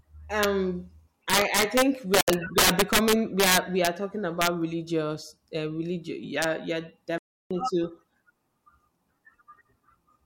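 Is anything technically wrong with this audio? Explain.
Yes. There are two kinds of fault in this speech.

Integer overflow occurs at 0.43 s, from 1.30 to 3.87 s, from 4.42 to 4.47 s just before "religious uh religion", and at 6.42 s just after it. Loud peaks exceed the integer limit by about 1 to 9 dB and wrap to the opposite sign. The result is violent cracks, harshest in the long stretch.

Bluetooth dropouts are the likely cause of two silences, from 2.21 to 2.28 s (70 ms) and from 7.18 to 7.51 s (325 ms). Packets arrived too late and were dropped. The sound cuts out and resumes further on, as if it had kept playing.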